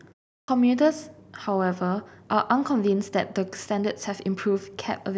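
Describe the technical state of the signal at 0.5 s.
Clipped start after a pause, from 0.44 to 0.48 s: the speech resumes after a silence of about 0.39 s, and the output path, having idled through that gap, needs a moment to wake and lock before it passes sound again. Roughly the first 42 ms of the returning speech is swallowed, so at 0.5 s the sound has only just broken in abruptly out of silence, its opening sounds missing and its onset hard-edged instead of building naturally.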